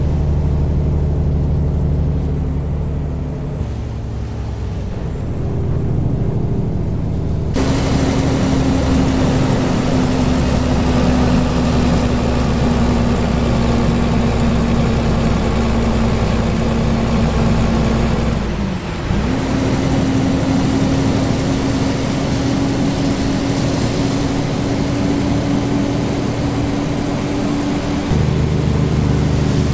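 At 3.60 s the sound jumps abruptly forward with no gap, as if roughly a second of material had vanished and the two sides were butted straight together. This is a skip ahead: a stretch of audio was discarded, either lost in transit or dropped by the jitter buffer when it overflowed, while later audio was already queued, so playback resumed from the newer material and the delay shrank by about a second.

From 10.07 s to 13.15 s the audio runs at 102% speed while the pitch stays put, a pace change small enough that it need not come across as hurried. This is a jitter buffer speed-up. The receiver was holding more audio than its target, so it repeatedly trimmed tiny pieces one or a few pitch periods long, removing something like 50 ms in total. Throughout, the G.722 call path at 64 kbps leaves nothing above 8 kHz.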